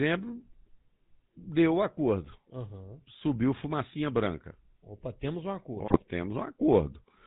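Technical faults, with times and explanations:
throughout GSM full-rate codec: Speech has a buzzy, gravelly roughness and nothing above 4 kHz, which fits a 13 kbps full-rate coder driving a vocal-tract filter with sparse regular pulses.
5.86–6.03 s GSM bit errors: For about 170 ms the sound breaks into squawks, pops and gargling as corrupted filter, pitch and gain values distort the spectrum and level, which fits around eight damaged frames. Unlike a dropout, the signal turns garbled rather than going silent.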